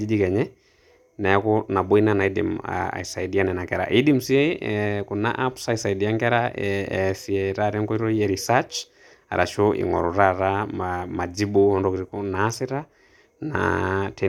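No technical faults detected.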